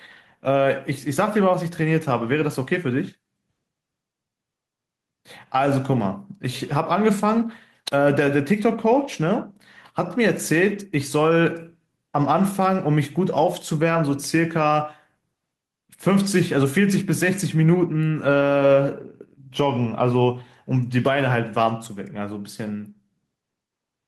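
Input gain was likely set far too high for the microphone, so a fast limiter pulls the level down on every loud syllable. The result is gain pumping throughout: the level swings by about 5 dB, squashing the speech.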